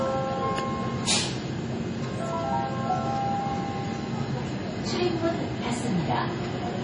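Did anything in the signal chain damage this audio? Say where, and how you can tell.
Yes, at the codec stage, throughout. Everything above 10.4 kHz is missing, and the remaining sound is watery and swirly, with smeared attacks. This is likely heavy MP3 compression, fitting a low bitrate around 32 kbps. A plain low-pass filter wouldn't add that flickering, swirling texture.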